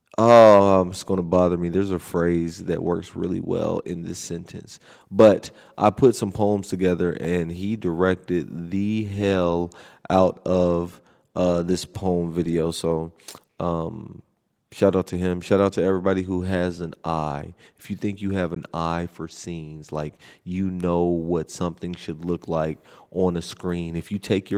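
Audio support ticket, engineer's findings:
Dropout at 18.55 s: a block of digital silence, about 17 ms long, hard cut out and straight back with no fade, heard as a short hole. Probable component is the output path, most likely the buffer not getting filled in time and zeros going out instead. The Opus layer underneath (24 kbps hybrid, fullband) just carries it through.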